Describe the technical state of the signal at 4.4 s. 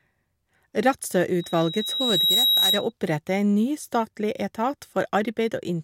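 The speech at 4.4 s is intact, with nothing audible disturbing the signal at that moment.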